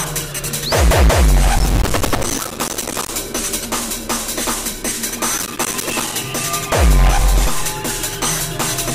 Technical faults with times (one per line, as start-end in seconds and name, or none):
1.58-3.09 processor overload crackle
5.38-6.15 processor overload crackle